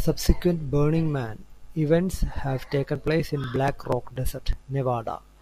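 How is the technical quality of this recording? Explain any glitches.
The recording has one clear problem. From 2.59 to 4.53 s the speech carries periodic USB or driver dropouts. Every 0.121 s something stalls the audio path, and a few milliseconds of signal are skipped, about fifteen times in all. Each gap makes a tick, heard only while speech is present.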